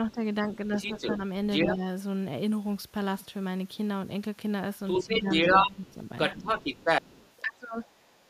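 From 0.12 to 1.85 s the speech is suppressed in double talk: for a few tenths of a second the level drops by about 10 dB. The likely cause is an echo canceller that cannot tell the near talker from loudspeaker echo and turns both down. On the waveform these are short notches in the envelope.

Between 0.51 and 1.75 s the other side's voice leaks through at roughly the same level as the speech. This is likely residual loudspeaker echo that the canceller left in the microphone signal. A spectrogram shows a second, overlapping set of harmonics.

From 4.87 to 8.08 s the leak returns, now about 5 dB louder than the speech. Inside that stretch, the suppression dips back in at 5.06 to 6.42 s by about 10 dB, then at 7.42 to 7.82 s by about 25 dB. That deepest cut leaves a near-gap in the waveform.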